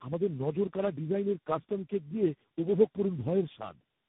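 Tandem speech coding throughout: four speech codecs in a row each re-encode the previous one's damage, leaving rough, warbly speech with nothing above 3.8 kHz.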